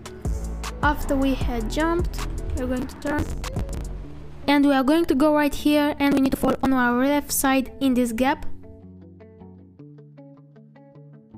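Processor overload crackle at 2.80–3.81 s and 6.12–6.66 s: missed buffers of around 10 ms are skipped, leaving gritty tearing, seen as dense broadband vertical streaks and waveform gaps.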